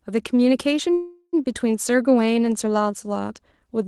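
At 0.93 s the speech stops and a call audio freeze begins. The last sound carries on as a fading buzz, then about 60 ms of silence, until 1.35 s. Delayed packets likely emptied the jitter buffer. Speech resumes where it stopped, now running about 0.4 s late.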